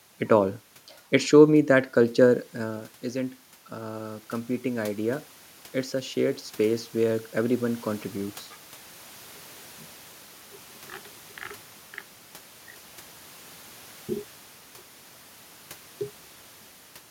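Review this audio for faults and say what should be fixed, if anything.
From 2.01 to 5.31 s the automatic gain control is rising. The voice level drops by about 11 dB when the talker moves away from the microphone near 2.5 s, and the gain control slowly adds about 5 dB to compensate, so voice and room noise swell together over those three seconds. On a waveform the envelope ramps upward, and on a spectrogram the noise floor between syllables brightens with it. A steady talker-to-microphone distance, or a slower, capped gain control, would prevent this.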